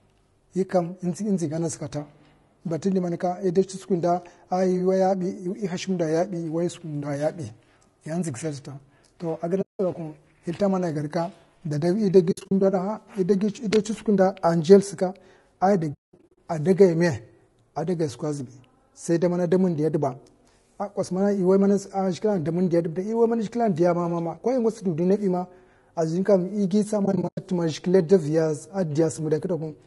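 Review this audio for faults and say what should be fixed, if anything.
The speech was likely encoded with low-delay AAC compression at a low bitrate, around 32 kbps by the sound. Its short frames capture pitch harmonics poorly, so throughout the voice sounds plainly rough and grainy, with noise filling the gaps between harmonics and a thin, synthetic-sounding top band.

AAC frame loss with muting occurs at four points where frames went missing and the decoder zeroed them. At 9.61 to 9.80 s there is a single gap of about 180 ms. At 12.31 to 12.52 s about 140 ms is lost in pieces, the longest run roughly 70 ms. At 15.93 to 16.38 s about 320 ms is lost, with one stretch near 200 ms. At 27.05 to 27.38 s about 180 ms is lost, the longest run roughly 100 ms. The overlapping windows fade each gap in and out, so these are soft-edged holes in the speech.

To prevent both, raise the encoding bitrate and protect the stream against packet loss with redundancy or loss concealment rather than plain muting.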